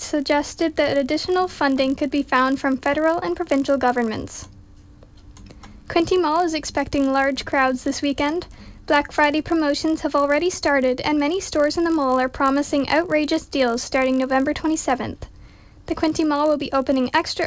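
Running right through the audio there's a steady 50 Hz buzz that only shows up when there's signal. That's the resampler restarted on every block: each 20 ms chunk gets converted on its own, likely a 44.1 kHz to 16 kHz conversion, so every block edge leaves a little tick.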